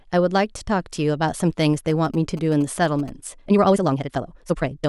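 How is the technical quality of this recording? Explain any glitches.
Two glitches affect the recording: a burst of radio interference in the middle and a sped-up final stretch.

From 1.90 to 3.10 s, a galloping dit-dit-dit of short buzzes sits under the speech, roughly 20 dB below it. These are GSM signalling bursts. A nearby 2G phone exchanging brief control traffic with the network emits pulsed radio energy. The audio circuitry rectifies those pulses into repeating buzzes at about 217 Hz, arriving in the clustered pattern heard here rather than as a steady drone.

From 3.39 s to the end, the speech suddenly runs at double pace while its pitch stays put, giving a rushed delivery. This is a time-stretched section, likely squeezed by software to fit a shorter duration. To compress the timing at a 2.0× speed without raising the pitch, the process drops short pieces of the waveform and splices the remainder together.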